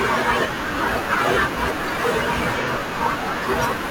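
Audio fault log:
2.61–2.68 s, AAC frame loss with concealment: a brief patch of about 43 ms in the speech turns smeared, noisy or phasey, then clean audio resumes. The gap's length fits a single lost AAC frame. The decoder had no data for that stretch, so it rebuilt the sound from the last good spectrum with altered phase and estimated energy. The patch is too short for any fade toward silence.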